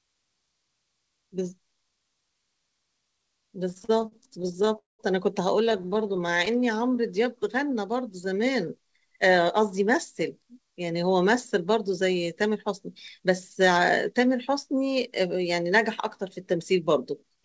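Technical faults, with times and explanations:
3.70–4.76 s and 5.65–6.56 s, repeated stalls (stutter): each stretch holds about 20 tiny gaps (the longest 39 ms, then 14 ms) bridged by stretching the last sound. Nothing is lost, but roughly a fifth of each span is filler, so the audio drags in jerks instead of stopping outright.
4.78–5.01 s, call audio freeze: the sound halts for about 0.2 s, most of it (170 ms) true silence, then resumes exactly where it left off, adding about 204 ms of delay. This is a single clean gap, not a stutter, likely from the jitter buffer running dry after packets were held up in transit.
6.51–8.67 s, jitter buffer slow-down: the audio plays at about 93% speed with unchanged pitch, as repeated single pitch periods add about 154 ms. Sounds are drawn out, unlike the jerky stalls just before it, as the buffer rebuilds its reserve.
10.57–12.69 s, 13.19–14.15 s and 16.83–17.38 s, jitter buffer speed-up: the audio runs at about 105–107% speed with pitch intact, trimming roughly 150 ms, then 50 ms twice. 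It sounds hurried rather than higher, as the buffer sheds excess delay. The band stops at 8 kHz, which fits a wideband call codec such as G.722.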